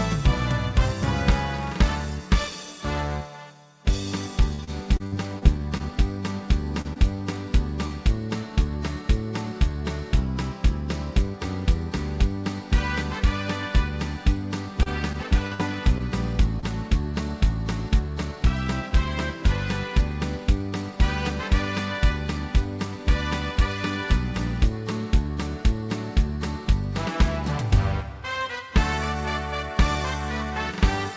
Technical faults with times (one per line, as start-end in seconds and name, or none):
4.41-5.64 jitter buffer slow-down
4.55-5.82 repeated packet loss (robotic sound)
6.81-6.98 short concealed packet loss
7.87-7.93 short concealed packet loss
14.83-16.66 repeated packet loss (robotic sound)
17.89-18.91 jitter buffer speed-up